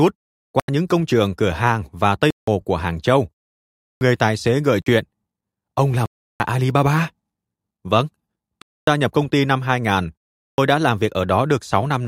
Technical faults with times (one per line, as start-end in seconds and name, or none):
0.60-0.68 block of digital silence
2.30-2.47 block of digital silence
3.67-4.01 block of digital silence
4.82-4.86 block of digital silence
6.06-6.40 block of digital silence
8.62-8.87 block of digital silence
10.50-10.58 block of digital silence